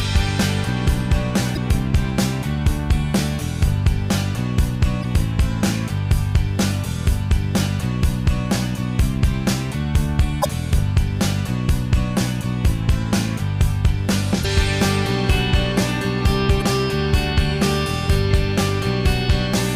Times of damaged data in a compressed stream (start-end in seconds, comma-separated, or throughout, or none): 1.53-1.57, 5.00-5.05, 10.41-10.46, 14.41-14.45, 16.58-16.62